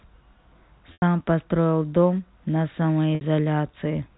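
Telephone speech, carried over G.711 A-law, drops out twice through packet loss with pitch repetition. From 0.93 to 1.02 s, about 90 ms of audio is missing, which fits three lost packets. From 3.15 to 3.21 s, about 60 ms is missing, which fits two. Each time, the receiver repeats the last pitch period as a held, buzzy tone. That tone fades toward silence within about 50 ms. The speech then returns through a short cross-fade.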